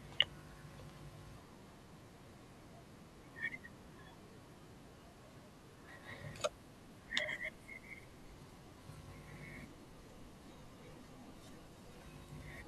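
Speech recording with no audible technical faults.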